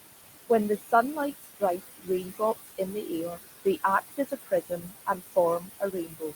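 From start to finish, noise suppressor artifacts come from the suppressor pulling the room noise, which sits only about 9 dB under the speech, down by about 18 dB frame by frame. The background sinks between the words and rises under them.

Speech cut by the noise suppressor occurs at 0.79–0.93, 1.16–1.62, 1.78–2.41, 2.61–3.11, 3.30–3.39, 4.01–5.37 and 5.59–6.33 s. The suppressor mistakes parts of the speech for noise and lowers them by about 11 to 20 dB, so soft sounds and word endings come out swallowed and faint.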